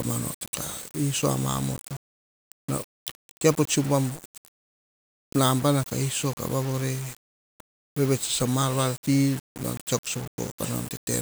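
A speech recording with low bit depth without dither from start to finish: grainy, signal-following distortion sits only about 20 dB below the sound, and quiet stretches sputter or drop out. The waveform shows visible stair-steps, which fits likely rounding to roughly 5 bits, and the spectrogram shows broadband grit that appears and disappears with the speech.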